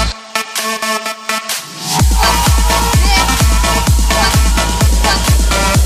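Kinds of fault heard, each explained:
No technical fault can be heard anywhere in the audio. There is nothing here to list.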